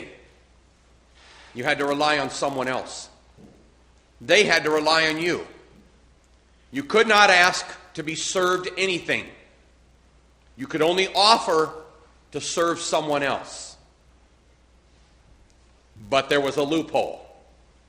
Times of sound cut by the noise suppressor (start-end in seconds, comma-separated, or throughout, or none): none